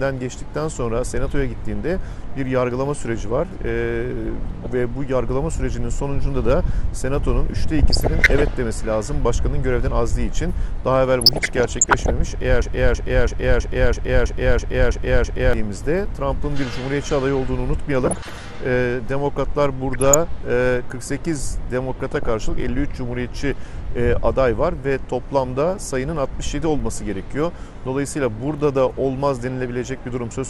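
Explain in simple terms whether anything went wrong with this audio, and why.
Three things went wrong. Throughout, the sound is dull and a bit gurgly, with a grainy edge. That's MP2 compression, likely squeezed so hard that the top end got switched off.

On top of that there's DAB burbling at 4.62–4.76, 7.79–8.54, 11.21–12.10, 18.04–18.30, 19.93–20.14 and 21.99–22.31 s. Those are reception errors garbling parts of the signal.

Then from 12.62 to 15.53 s there's a broken-record loop. A 0.33 s piece repeats nine times back to back, likely because playback stalled, and the audio that should have played there is gone.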